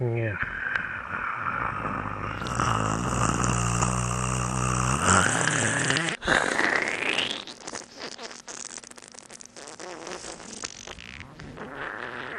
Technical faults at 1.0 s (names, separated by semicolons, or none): MP2 compression